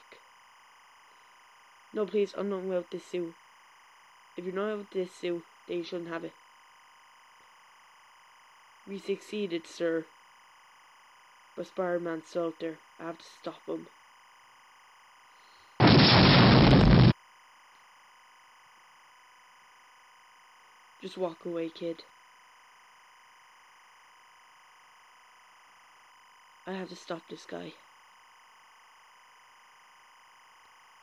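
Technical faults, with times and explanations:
Throughout, timecode bleed: linear timecode running at 25 frames per second is leaking in from a nearby track or cable, its square wave flipping between roughly 1 and 2 kHz, so a steady chirping warble sits about 30 dB beneath the sound.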